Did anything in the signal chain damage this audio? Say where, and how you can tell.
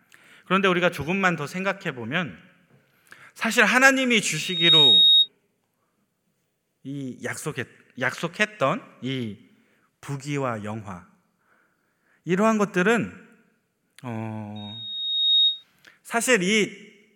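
Yes. A loudspeaker feedback squeal arises in the analogue reinforcement path, where the microphone picks up the loudspeaker it feeds and the loop gain at 3.8 kHz exceeds one. It erupts from 4.35 to 5.29 s, swelling within about 0.4 s to a piercing tone well above the speech, and again from 14.56 to 15.64 s, building more slowly and peaking at a lower level. Each time, a single steady pitch blooms over the speech and then collapses.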